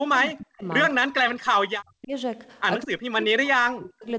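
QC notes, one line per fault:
0.00–0.64 s, 0.93–2.13 s, 2.83–4.07 s: speech suppressed in double talk. The speech dips by as much as about 40 dB, likely because an echo canceller mistook it for far-end echo during overlapping talk. The waveform shows collapsed envelopes, and the spectrogram shows thinned bands under an 8 kHz ceiling.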